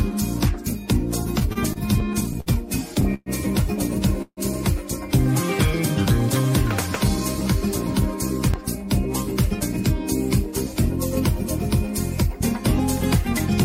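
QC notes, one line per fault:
1.39 to 3.29 s, repeated stalls (stutter): the sound catches and drags twelve times, each hitch held on a continuation of what came just before, the longest about 119 ms. Together the holds add roughly 0.31 s, about 16% of the span, yet nothing is skipped. Packets were arriving late or slower than playback, so the jitter buffer kept running dry and the receiver stretched the last sound each time until data caught up.
4.22 to 4.40 s, call audio freeze: the sound hangs for about 148 ms, the last sound held and fading away with the last 50 ms gone fully silent, then resumes exactly where it stopped, now running about 0.15 s later than before. Nothing is lost; a gap has been inserted. The likely cause is packets held up in transit, emptying the jitter buffer so the receiver filled the wait by extending and fading the last sound.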